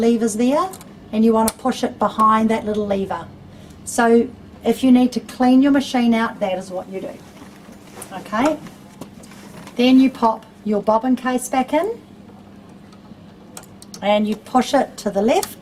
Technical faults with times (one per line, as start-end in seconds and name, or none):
none